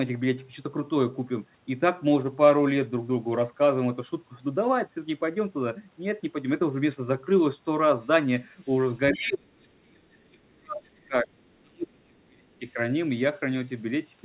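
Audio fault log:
8.66–8.71, 10.13–10.27 and 11.41–11.62 s: other side's voice leaking through. Brief, very faint scraps of a second voice sit far below the main talker, likely far-end audio from the loudspeaker that the echo canceller didn't fully strip out, so fragments slip past.
9.13–10.09, 10.30–11.29 and 11.62–12.67 s: speech suppressed in double talk. For about a second each time the talker gets pushed way down, nearly to silence at the deepest point, likely because both sides spoke at once and the canceller ducked everything instead of separating voice from echo.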